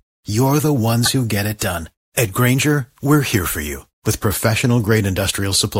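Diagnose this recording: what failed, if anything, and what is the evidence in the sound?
The failure sits at the codec stage: damaged data in a compressed stream. At 1.04 to 1.08 s, right after "you're the" and before "who get it done", the speech gives way to a short disruption of about 40 ms. Corrupted bytes in the stream made the decoder misread or reject those frames, lose frame sync and scan forward for the next valid header, and that is what comes out as the disruption.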